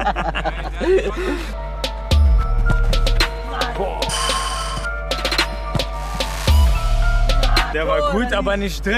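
Mains hum runs through the whole clip. A steady 50 Hz tone sits about 10 dB below the sound, from power-line interference, likely a ground loop.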